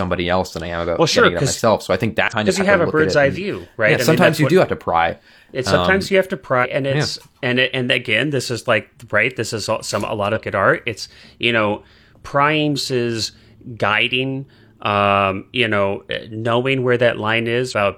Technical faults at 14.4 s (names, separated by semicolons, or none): none